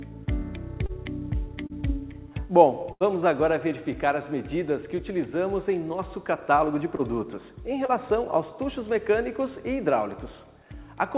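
Short concealed packet loss at 0.86 s and 1.67 s: about 30 ms failed to arrive, and the receiver extended the preceding sound to cover it, leaving a brief smear or wobble. A burst of packet loss at 2.92 to 3.03 s drops about 90 ms; the concealment holds and fades the last sound for roughly 80 ms before resuming further on. Further short concealed losses at 6.96 s and 7.86 s repeat the brief smear, all heard within a G.711 mu-law path with nothing above 4 kHz.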